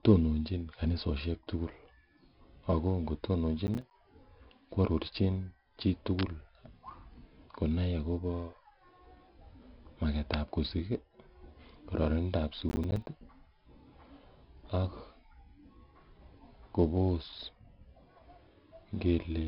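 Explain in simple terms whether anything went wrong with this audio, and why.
Three problems can be heard in this speech clip.

4-bit ADPCM compression runs throughout: every sample is squeezed into a rough 4-bit step, leaving gritty hiss on louder speech and nothing above 5.3 kHz.

Processor overload crackle tears the sound from 3.67 to 3.91 s and from 12.69 to 13.07 s. Repeated missed deadlines on short buffers, roughly 10 ms each, leave strings of tiny silent gaps.

An electrical switching spike appears as a sharp snap from 6.19 to 6.23 s and again at 10.34 s, likely picked up from a nearby switch or static discharge.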